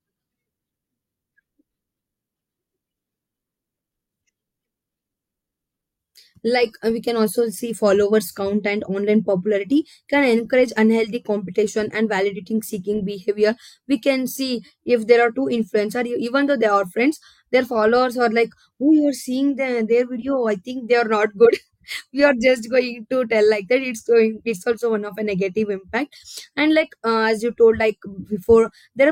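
No audible technical faults.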